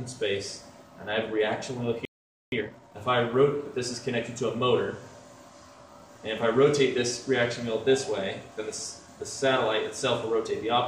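At 2.05 s the sound stops dead for about 0.47 s, a playback stall, likely the player running out of data or its thread being blocked. Unlike a dropout or gap in the recording, the silence ends with the sound resuming.

From 2.52 s to 2.98 s comes time-compressed catch-up: the player clears its backlog by cutting out short pieces and cross-fading the rest, so the audio runs at double speed. The pitch stays normal, which separates it from a fast-playing clock error.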